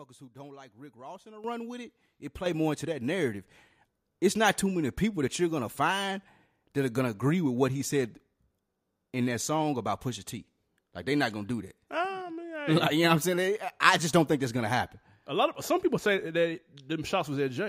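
Microphone volume stepped up twice in this speech clip: at 1.44 s, between "in a" and "with it", the level jumps by about 10 dB, and again at 2.46 s, just before "more into that narrative", by about 8 dB. Voice and background rise together each time, as when call software judges the microphone too quiet and raises the device's input volume in a single step.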